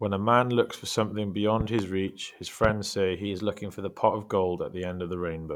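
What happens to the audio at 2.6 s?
A sudden voltage pulse, likely from a plug, switch or static discharge, is added to the signal from 2.64 to 2.72 s, just after "reach his". It sounds like a loud pop, two in quick succession, about 15 dB above the speech, which carries on underneath.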